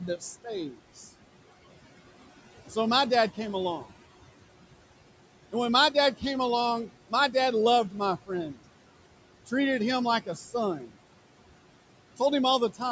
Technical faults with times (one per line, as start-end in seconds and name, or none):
0.00-12.91 noise suppressor artifacts
0.00-1.05 speech cut by the noise suppressor
7.90-8.60 speech cut by the noise suppressor
10.26-10.96 speech cut by the noise suppressor